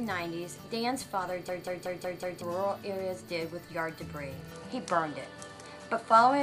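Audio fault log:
1.49–2.42 s, system hang loop: the sound catches on one 186 ms fragment and repeats it exactly five times, a rapid stutter at 5.38 Hz. The system stalled while the audio hardware kept replaying the same ring buffer. The loop length fits an 8192-sample buffer. Roughly a second of the real audio never got recorded, so when the loop ends the sound resumes from a later point rather than from where it caught.
4.52–6.42 s, input switched to a poorer device: with no gap at the switch, the tone changes abruptly and stays that way to the end. Nothing remains above 11.4 kHz, the level shifts by about 5 dB, and a new noise floor sits about 35 dB below the signal. The likely cause is the system changing its input in mid-recording to another microphone or a headset's call profile, which has a narrower band and its own tone, level and noise.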